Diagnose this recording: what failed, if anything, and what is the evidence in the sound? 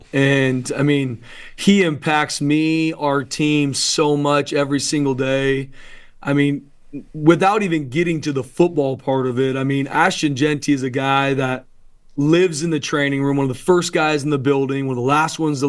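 Nothing in the chain seems to have failed here, since there's no audible break, glitch or damage anywhere in the sound to point at any stage.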